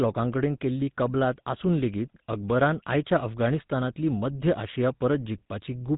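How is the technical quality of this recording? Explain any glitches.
The recording is held back by GSM full-rate codec damage across the whole clip. The speech passes through a vocal-tract model excited by sparse regular pulses, giving a plainly audible buzzy, gravelly roughness consistent with 13 kbps GSM, and nothing above about 3.8 kHz survives.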